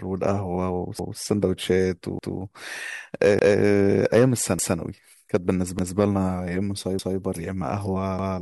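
Overlapping chunks at 0.99, 2.19, 3.39, 4.59, 5.79, 6.99 and 8.19 s: each 1-second chunk begins 200 ms before the previous one ends, so that slice of speech replays as a regular stutter.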